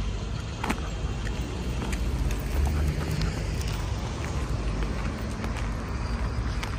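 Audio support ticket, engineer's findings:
A small forward jump in the audio at 1.92 s and 4.26 s. Each loses only a few milliseconds, no gap or silence. Likely a dropped buffer (overrun): capture side fell behind, hardware overwrote unread samples, and the audio either side was butted together. Distinct from a dropout or underrun, which leaves a silent hole or repeated block. Here the sound skips straight ahead.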